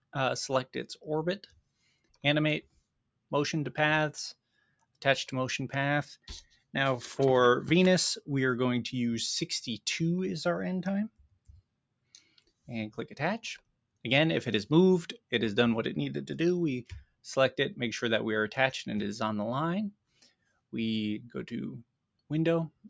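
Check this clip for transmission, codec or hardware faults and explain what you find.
A speech-tuned noise suppressor was left running on non-speech material, so it processes the whole clip. This is the noise suppressor applied to music or sounds: the suppressor treats sustained and ambient content as noise, making the level swing by around 5 dB and the sound pump and thin.

The same suppressor also produced sound cut by the noise suppressor at 0.94–3.32, 4.34–5.01, 6.17–6.75, 11.09–12.68, 13.58–14.04, 17.03–17.25, 19.92–20.73 and 21.83–22.85 s. In each span it judged the sound to be noise and pulled it down by about 21–22 dB, so held and decaying parts sink abruptly.

The call microphone processing's band limit, with nothing above 8 kHz, is expected behaviour.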